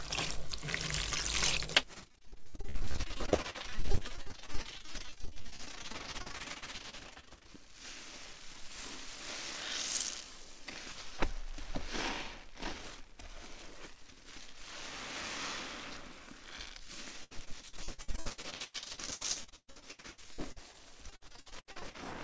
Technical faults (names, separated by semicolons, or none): repeated packet loss (robotic sound)